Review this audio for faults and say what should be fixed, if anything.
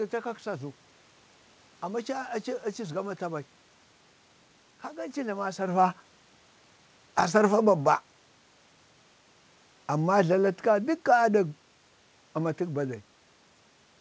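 The automatic gain control judged the input too loud or its background noise too strong and pulled its gain down gradually, by about 4 dB, from 9.92 to 11.55 s. The speech starts that stretch at full level and then sinks, with the room noise underneath dropping by the same amount, which is how a gain change differs from the talker moving, as heard near 5.5 and 13 s. To prevent it, set the input level lower or slow the AGC's attack.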